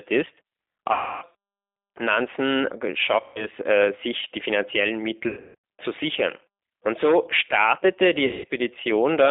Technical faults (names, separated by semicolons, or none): G.729 codec; VoIP packet loss concealed by the speech codec